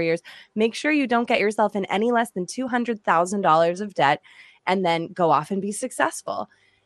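From the start the speech sounds dull and plainly gurgling, with a granular roughness and the top end thinning and flickering as if upper bands switch in and out. The likely cause is MP2 compression at a rate that fits around 80 kbps. MPEG Layer II splits the signal into 32 sub-bands and shares bits among them; short of bits, it drops upper bands and quantises the rest coarsely, leaving audible damage.

At 6.44 s a brief burst of noise blips breaks over the speech. This is DAB burbling: a small fraction of bits slipped past error correction into the coded audio, where corrupted samples put short blips of noise into single sub-bands. The disturbance points to eight audio frames being hit, yet it stays short and sharply localised.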